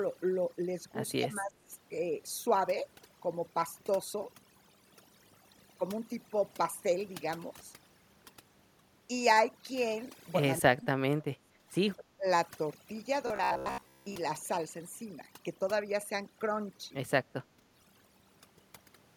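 Overdone noise removal runs through the whole clip. An over-aggressive noise reducer pulls individual frequency bands down whenever they sit near its noise estimate, leaving near-silent gaps with twinkling specks.

Speech suppressed in double talk follows at 1.18 to 1.71 s, 10.6 to 11.67 s and 11.97 to 12.27 s. The level dips by up to about 25, 35 and 20 dB, likely an echo canceller ducking the near talker along with the loudspeaker echo while the far end spoke too.

Robotic sound from repeated short buffers occupies 13.27 to 14.15 s. Most of that stretch is made of short repeated segments, which impose a rigid, metallic buzz at 66.8 Hz. This fits a buffer of about 15 ms being replayed because fresh audio likely arrived too late.

A final brief double-talk dip of about 20 dB hits 17.57 to 17.66 s.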